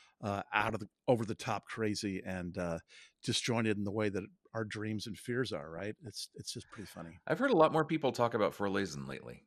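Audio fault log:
Throughout: MP2 compression. The speech sounds dull and plainly gurgling, with a granular roughness. This is likely Layer II coding at a low rate, around 80 kbps. Too few bits forces whole upper sub-bands to drop out and leaves the rest coarsely quantised. On a spectrogram the top end looks ragged, with horizontal bands flickering on and off between frames. The waveform shows little beyond slightly grainy envelopes.
0.60–0.86 s, 2.55–3.44 s, 5.76–6.15 s, 8.98–9.14 s: DAB burbling. Four bursts of burbling sit over the speech, the longest around 2.55–3.44 s. Bit errors well under one percent are slipping past the error correction into the Layer II data, so corrupted samples put short noise blips into single sub-bands and corrupted scale factors make sub-bands leap in level for up to a frame. On a spectrogram this shows as scattered bright rectangular blocks. The waveform shows brief spiky level jumps.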